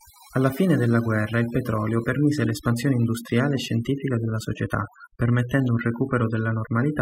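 From start to finish the speech carries overdone noise removal. A noise reduction stage set far too aggressively has pulled down or muted any frequency band sitting close to its noise estimate, taking soft parts of the voice along with the noise. Between phrases the background drops to near silence sprinkled with twinkling specks. On a spectrogram this shows as scattered isolated dots in an otherwise empty floor, with speech harmonics looking patchy and eroded.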